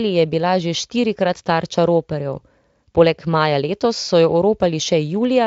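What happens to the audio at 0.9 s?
Nothing goes wrong at 0.9 s; the speech there is intact, carried cleanly through the Speex codec at a setting high enough that its damage is faint at most.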